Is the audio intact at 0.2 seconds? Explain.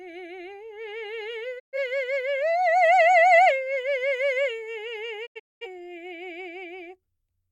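Yes, the music at 0.2 seconds is intact, with no fault at that moment.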